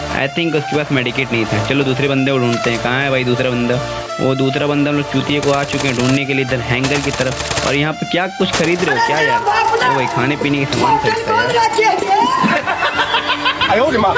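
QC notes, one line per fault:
QC notes, one line per fault:
Throughout, gain pumping: the gain ducks by around 10 dB under every loud sound, likely excessive gain with a fast limiter clamping down. The waveform looks squashed, its floor rising between peaks, and the spectrogram brightens and dims with each burst.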